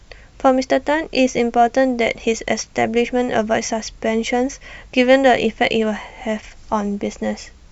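No technical faults can be heard anywhere in it.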